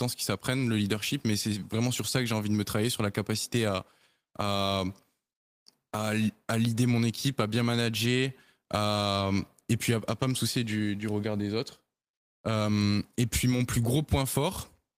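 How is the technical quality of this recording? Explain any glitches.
One brief glitch in this speech recording: a lost packet rebuilt from error correction at 8.89 to 8.91 s. For about 20 ms, which fits a single lost packet, the decoder played the low-bitrate backup copy carried in the next packet, so the speech never drops out; that slice just sounds rougher and noisier. Unlike ordinary packet-loss concealment, which guesses from earlier audio and tends to smear or buzz, this is real but coarser signal.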